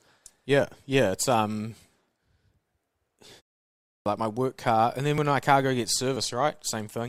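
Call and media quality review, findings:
Clipped start after a pause, 3.91–4.06 s: 149 ms onset lost after 0.58 s silence; output device waking or relocking. Waveform shows hard-edged entry, no attack.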